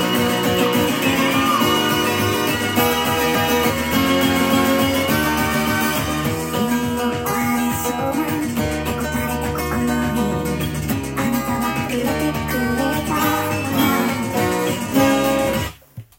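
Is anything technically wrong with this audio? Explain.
Yes. The whole clip plays at the wrong sample rate. Everything runs about 1.38 times too fast, and the pitch sits roughly 5.5 semitones too high. That fits audio recorded at 32 kHz being played back at 44.1 kHz with no conversion. Each sample is simply clocked out faster than it was captured, so speed and pitch rise together by the same ratio. The result sounds hurried, thin and chipmunk-like from start to finish.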